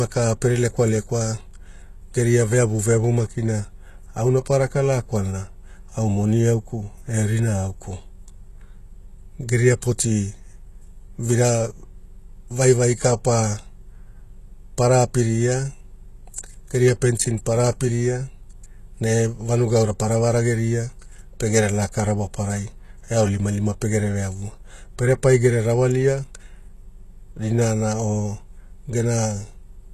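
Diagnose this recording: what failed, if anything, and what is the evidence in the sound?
HE-AAC compression, throughout: gritty, lispy treble with nothing above 12.3 kHz, likely codec-stage band replication copying lower bands upward, fitting about 16 kbps.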